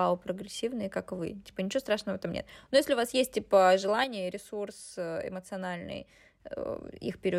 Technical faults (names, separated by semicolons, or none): sudden gain jump